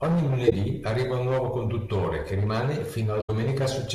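At 0.44 to 0.53 s, just before "arriva un nuovo conduttore", and again at 3.21 to 3.30 s, after "nuovo conduttore che rimane", a corrupt frame was concealed: the decoder covered damaged data, about four frames' worth.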